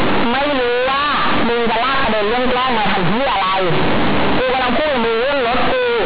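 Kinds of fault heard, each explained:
Companded audio read as linear: very loud, buzzy distortion with strong noise filling the pauses throughout the speech, because mu-law bytes are played as plain 8-bit samples without expansion.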